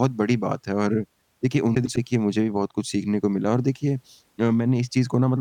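At 1.75 s, two neighbouring runs of frames arrived out of order and were decoded in that sequence, fitting two blocks of four frames, each about 0.10 s long. Until 1.98 s the speech plays with its halves swapped, a garbled flutter.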